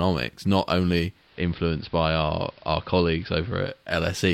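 A speech recording with digital radio blending to analogue from 0.98 s to 4.0 s. At 0.98 s the sound cross-fades over about 0.47 s from the digital stream to the station's AM broadcast. It returns to digital at 4.0 s. During that span the AM broadcast's narrower bandwidth cuts the treble, so the sound turns dull. The level drops by about 2 dB. A hiss comes up, roughly 30 dB below the speech.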